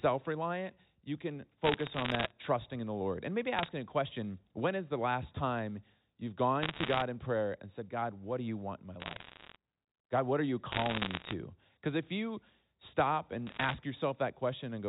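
Bursts of bit errors on a digital phone line crackle in at 1.64–2.31, 3.57–3.68, 6.62–7.02, 9.0–9.56, 10.72–11.34 and 13.47–13.74 s, where flipped bits in single samples tick sharply over the speech.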